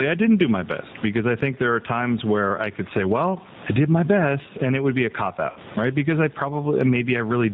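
Gain pumping runs through the whole clip. The gain swings by around 15 dB. Loud and soft parts sit close in level. The likely cause is gain set far too high, with a fast limiter clamping it.

The G.729 codec also colours the entire clip, at 8 kbit/s. It rebuilds speech from a vocal tract filter, a pitch predictor and a few pulses per frame. Nothing above 4 kHz survives. The speech sounds plainly rough and synthetic, and the background warbles.

From 5.50 to 5.59 s there is VoIP packet loss concealed by the speech codec. About 60 ms of audio went missing, which fits three 20 ms packets. The decoder stretched its last pitch and filter into a buzzy tone or coloured noise that fades. The speech stays weak or distorted briefly after packets return.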